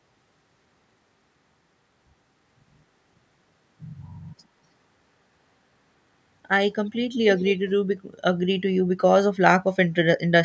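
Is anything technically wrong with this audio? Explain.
Yes. From 7.37 to 7.58 s there is an echo leak: a faint copy of the speech, roughly 20 dB down, arriving about 246 ms late, likely from a far-end speakerphone whose echo canceller let some through.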